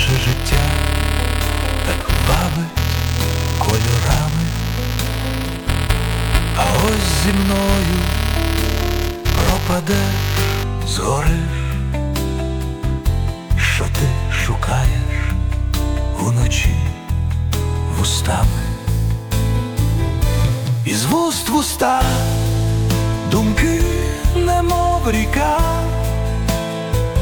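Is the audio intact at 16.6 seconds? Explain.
Yes, the audio is intact at 16.6 seconds, with no dropout, click, distortion or other fault at that moment.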